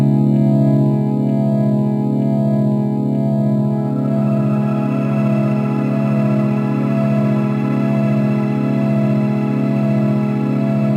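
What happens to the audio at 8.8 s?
At 8.8 s, as across the whole clip, crude rate conversion from 44.1 kHz to 48 kHz by repeating nearest samples adds an inharmonic fizz about 40 dB down that, unlike steady hiss, follows loud, high sound.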